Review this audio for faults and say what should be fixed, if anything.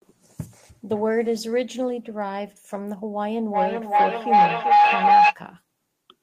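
A microphone-to-loudspeaker loop gained level on each pass, building a feedback howl near 700 Hz from 3.51 to 5.38 s, with a loop delay of about 0.4 s, peaking about 10 dB above the speech. To prevent it, keep only one device's microphone and loudspeaker active in the room, or switch to headphones.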